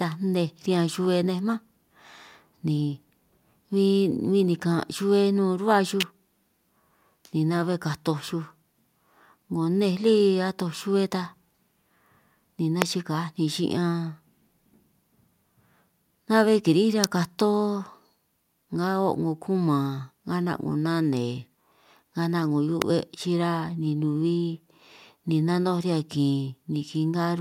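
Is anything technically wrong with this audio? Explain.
Yes. An electrical switching spike, likely arcing from a nearby switch or motor coupling into the audio line, adds sharp snaps over the speech at 6.00 to 6.03 s, 12.82 s, 17.04 s and 22.82 s.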